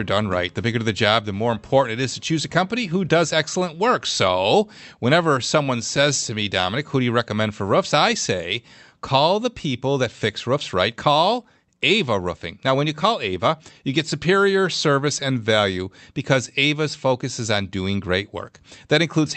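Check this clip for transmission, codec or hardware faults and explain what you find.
Two related timing faults are present in this speech clip, both tied to a clock mismatch on the call link.

Clock drift between sender and receiver runs through the whole clip. The sender's clock is roughly 1.5% slower than the receiver's, so the jitter buffer keeps draining and the receiver must stretch the stream to avoid running dry. The result is a faintly slowed, unsteady pace rather than any single obvious glitch.

Repeated timing corrections appear from 0.14 s to 19.28 s. To keep up with the slow sender, the receiver repeatedly duplicates short slices of audio, playing at 99% speed and adding around a third of a second in total. Each repeat is small, heard, if at all, as slight hiccups or a wobbling tempo at uneven intervals.

The audio passed through an Opus call codec whose bandwidth tops out at 8 kHz, with a bitrate pointing to roughly 64 kbps.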